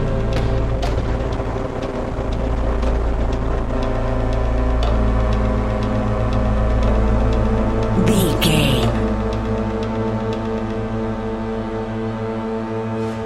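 A call bitrate drop hits the audio from 0.59 to 3.79 s: the encoder appears to fall from around 128 kbps to roughly 16 kbps for about 3.1 s, so the sound turns coarse and watery, with the high frequencies cut away until the bitrate recovers.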